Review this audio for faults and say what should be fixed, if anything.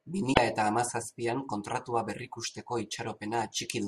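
Damaged data in the compressed stream corrupts frames between 0.30 and 0.38 s, so the decoder misreads them, loses sync and hunts for the next valid frame header. The speech is briefly replaced by a short glitch lasting about 80 ms. To prevent it, carry the stream over a transport with error checking and verify file integrity before decoding.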